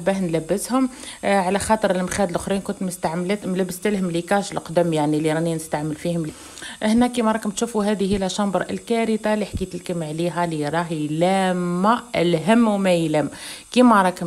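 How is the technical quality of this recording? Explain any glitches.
The recording has two timing glitches close together, both of which disturb the flow of the sound.

At about 6.29 to 6.31 s there is a skip ahead. The sound jumps abruptly forward with no gap or fill, and the material on either side is spliced almost directly together. About a second of audio is simply missing. This happens when a run of audio is lost in transit or thrown away by an overfull jitter buffer while later audio is already queued. Playback resumes from the newer audio, so the delay drops by roughly that same second.

From about 6.89 to 7.76 s a jitter buffer speed-up follows. The sound runs slightly fast, at about 106% speed, and feels a little hurried, but its pitch stays the same. The receiver's buffer held more audio than its target, as happens when delayed packets arrive together, so it trimmed many short slices, each one or a few pitch periods long, in quick succession. 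Together these removals total roughly 70 ms and bring the latency back toward normal.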